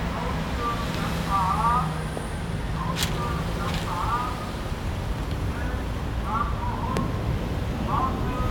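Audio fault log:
0.95–0.97 s and 6.97–6.99 s, loud pop: two single sharp pops jumping about 15 and 20 dB above the sound, which carries on underneath, likely from a brief voltage spike such as a switch or static discharge.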